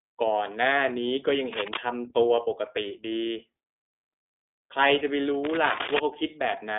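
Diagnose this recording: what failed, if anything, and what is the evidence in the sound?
The codec stage failed: the speech passed through an iLBC codec, and the coding damage is plainly audible. Nothing is heard above 3.8 kHz, the band sits roughly between 250 Hz and 3.6 kHz, and the rough, synthetic texture fits iLBC's 30 ms, 13.33 kbps mode, which codes each frame independently.

The analogue wiring stage likely failed, with a worn cable or connector shifting contact resistance. This produces cable scratch noise, dense uneven rustling bursts from 1.53 to 1.78 s at slightly below the speech level, and from 5.44 to 5.99 s at roughly the speech level.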